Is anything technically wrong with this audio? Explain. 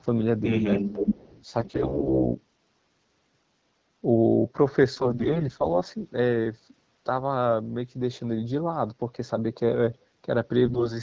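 Yes, three kinds of fault are audible in this speech.

From 0.78 to 0.82 s the speech briefly dips by roughly 15 dB. This is likely speech suppressed in double talk: with both sides active, the echo canceller could not tell its own talker from loudspeaker echo and attenuated both.

From 0.89 to 1.45 s a delayed copy of the speech returns about 227 ms behind the original, only a few dB quieter. This points to an echo leak, likely from a loudspeaker whose echo canceller left residual pickup that was sent back.

AMR bit errors occur at 1.60 to 2.34 s, 4.95 to 5.81 s and 10.66 to 10.93 s. Flipped low-priority bits in the AMR-WB frames misplace excitation pulses and skew gain and spectral parameters. Pitch and level roughly hold, but the speech turns hoarse and gargly, most heavily in the first burst.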